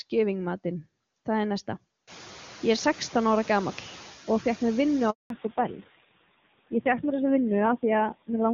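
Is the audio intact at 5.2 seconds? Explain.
No. A handover gap runs from 5.10 to 5.30 s, about 200 ms. While the call switched from one network to another, no speech frames got through, so the sound fades out within a few tens of milliseconds and stays silent until the new link picks up.

Noise suppressor artifacts are also present at this point, as they are throughout the clip. The suppressor pulls down bands it judges to be steady noise by about 13 dB, frame by frame, so the background dips between words and rises under them.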